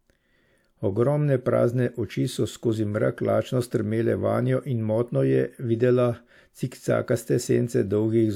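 No technical faults are audible.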